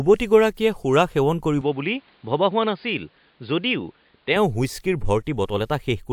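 From 1.61 s to 4.36 s the speech abruptly turns dull and boxy, with nothing above 4.9 kHz. It is about 5 dB quieter and carries faint new background noise, with no gap at either change. The likely cause is an input switched to a poorer device, then back.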